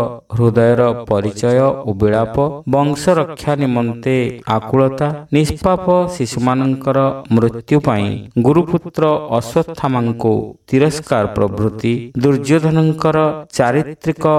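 Nothing stood out on listening; no technical problem can be heard anywhere in the audio.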